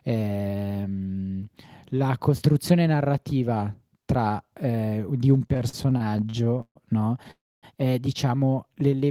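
It's a short speech clip with two kinds of network trouble. From 5.47 to 6.77 s, just before "no è diciamo", there are repeated stalls (stutter): 18 little gaps where packets came in late and the receiver kept stretching the last sound. That adds up to about 380 ms of patched-in audio, with the longest gap at 138 ms, so roughly 29% of that stretch is filler and the speech drags. A milder run of the same thing happens at 8.75 to 9.05 s, right after "no è diciamo": five short gaps of 23 ms or less. Between those, at 7.31 to 7.65 s and just before "è diciamo", there's a call audio freeze. The sound hangs and fades out, leaving about 260 ms of silence out of roughly 317 ms of fill, and then picks up where it left off, so nothing is lost. That's most likely packets held up long enough for the jitter buffer to run dry.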